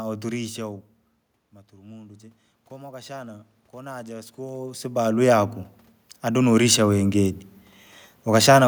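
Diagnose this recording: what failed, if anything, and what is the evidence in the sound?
The call processing stage is where this goes wrong: automatic gain rising. After the input drops by about 15 dB, the AGC spends 1.51 to 5.6 s creeping its gain up by about 8 dB, so the speech and the room noise swell together rather than the level jumping back.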